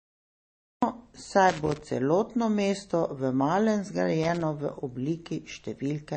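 A short speech recording, it opens with a cut-off start: digital silence runs from the beginning to about 0.83 s, and then the audio appears abruptly in the middle of a sound, with no attack or fade-in. On a waveform this shows as a flat line that jumps straight to the speech's level at 0.83 s, and on a spectrogram as a blank region ending in a sharp vertical edge where energy appears across the band at once. Two bursts of loose connector crackle follow, from 1.49 to 1.81 s and from 4.23 to 4.42 s. Each is an irregular scratching as a faulty contact rapidly makes and breaks the signal path, chopping the audio. On the waveform these spans look jagged, with sudden dropouts and spikes. On a spectrogram they appear as scattered thin vertical streaks of broadband energy over the speech. Throughout the clip the spectrum stops dead at about 8.3 kHz, and the sound has a watery, smeared quality. 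A spectrogram shows a hard horizontal ceiling with nothing above it, and the content below looks blocky and patchy. This is likely low-bitrate audio saved at a high bitrate: the cut-off and artefacts fit an MP3 at around 32 kbit/s that was later re-encoded at something like 256 kbit/s. The larger file adds nothing back above that ceiling.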